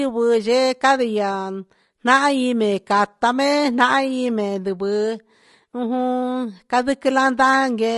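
From start to finish, the speech is rough and grainy, with a hiss filling the gaps between the pitch harmonics and a top band that sounds thin and artificial. This is likely low-delay AAC compression (AAC-ELD): too few bits are left for its roughly 500 frequency lines a frame, so coding noise fills in, and the damage fits a rate near 32 kbps. Longer-frame codecs tend to smear transients into pre-echo; here the damage is instead noise between the harmonics.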